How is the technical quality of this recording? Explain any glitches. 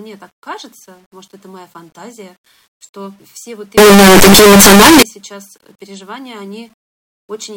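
The recording has one clear glitch, from 3.78 to 5.02 s. The cause is likely a signed and unsigned mix-up in the 8-bit samples for that stretch. With the top bit flipped, silence lands at one extreme of the range, and every zero crossing becomes a full-scale jump. The speech turns into very loud, harsh distortion, and its quiet moments blare as loudly as the rest. Outside that span the 8-bit audio decodes correctly.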